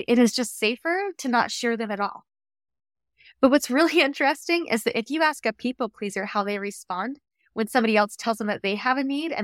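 The speech recording has no audible technical fault at any point, and its signal stays continuous and intact throughout.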